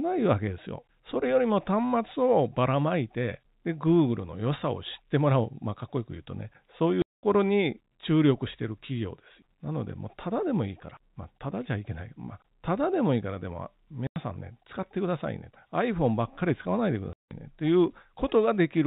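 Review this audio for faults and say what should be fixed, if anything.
The speech drops out abruptly three times: from 7.02 to 7.23 s (210 ms), 14.07 to 14.16 s (90 ms), and 17.13 to 17.31 s (180 ms). This is packet loss filled with silence. Whole packets never arrived, and the receiver inserted dead air with hard edges. Every gap is a multiple of 30 ms, which fits 30 ms packets. The narrow telephone band under 4 kHz comes from G.711 coding and is not part of this fault. To prevent it, add packet loss concealment at the receiver, with a jitter buffer or forward error correction on the link.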